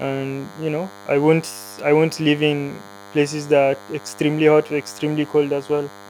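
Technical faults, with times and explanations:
Throughout, DECT cordless phone buzz: a thin, raspy 100 Hz buzz rich in harmonics sits about 20 dB below the speech. Nearby radio bursts every 10 ms are rectified, unlike smooth mains hum.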